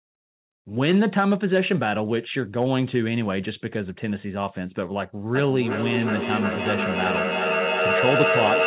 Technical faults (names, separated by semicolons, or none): feedback echo between two devices